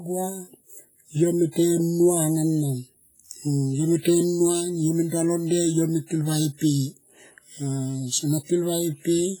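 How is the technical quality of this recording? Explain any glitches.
Quality is poor, with heavy codec damage across the whole speech clip. Throughout, a ringing, washy texture and hiss that breathes with the signal suggest likely WMA compression near 24 kbps: long transform blocks smear quantisation noise over tens of milliseconds and zero weak components.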